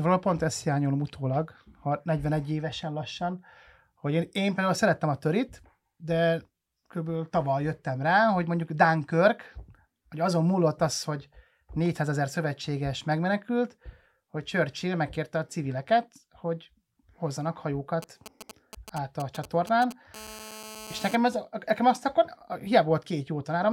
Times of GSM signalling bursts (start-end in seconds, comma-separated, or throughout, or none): 18.02-19.93